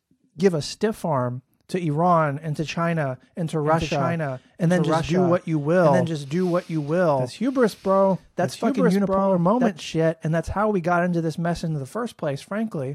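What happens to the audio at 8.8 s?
The speech is likely being captured a second time through a slower path, giving a doubled audio track from 3.65 to 9.69 s. A full-band copy trails about a second behind at roughly equal loudness, dry and without room colour, starting and stopping abruptly.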